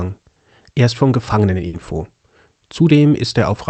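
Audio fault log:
1.67–1.75 s, burst of packet loss: for about 60 ms the receiver extends the last speech sound and lets it fade, then the speech resumes with about 60 ms skipped. Unlike a plain dropout, the gap is filled rather than silent, and the speech jumps ahead.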